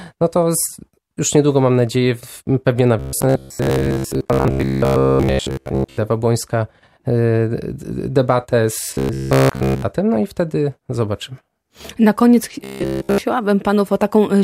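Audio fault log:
2.99–5.99 s, 8.84–9.82 s and 12.64–13.21 s: robotic sound from repeated short buffers. The speech becomes a rigid metallic buzz fixed at 66.8 Hz, likely because audio arrived too slowly and a chunk of about 15 ms was looped in place of most of the real signal, and all of it in the last stretch.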